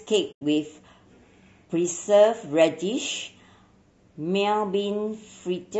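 Throughout the clip the speech sounds rough and grainy, with a hiss filling the gaps between harmonics and a thin, synthetic top band. This is likely low-delay AAC compression (AAC-ELD): its short frames resolve pitch poorly, and the damage is plain enough to suggest a bitrate around 32 kbps.

From 0.31 to 0.42 s, AAC frame loss with muting leaves a soft-edged hole of about 100 ms. The decoder zeroed the missing frames, so the overlapping windows fade the sound out and back in.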